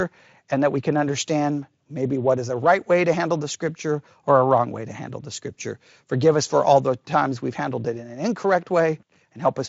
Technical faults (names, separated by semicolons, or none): none